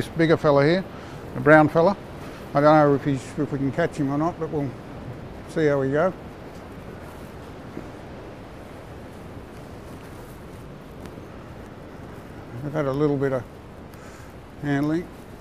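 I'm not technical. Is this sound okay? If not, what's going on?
No. At about 11.06 to 11.20 seconds there is a loud pop, actually two quick pops. A plug, switch or static spark likely caused it.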